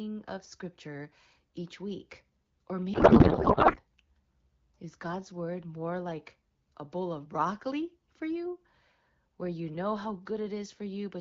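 From 2.93 to 3.78 s, right after "scripture each week or", there is a codec payload misread. The speech gives way to garbled noise and warble that barely tracks it. The decoder is reading AMR frames with their fields shifted. The pattern fits octet-aligned packing being read as bandwidth-efficient. The damage stops at 3.78 s, once both ends agree again. Elsewhere the speech stays clear, with only light damage from AMR-WB at around 12.65 kbit/s.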